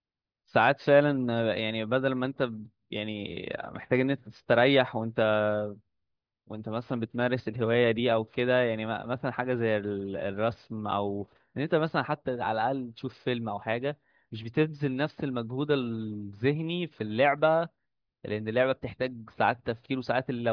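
No technical faults are audible.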